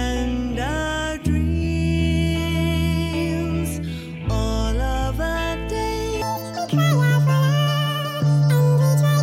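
At 6.22 s the audio abruptly switches to being read two samples at a time (double speed), and it stays that way through to the end. The reader is treating each pair of consecutive samples as a single frame, as though the stream held two channels or samples of twice the width. Playback therefore runs at 2x speed and 12 semitones, a full octave, higher. Any strong content above a quarter of the sample rate folds back as aliasing.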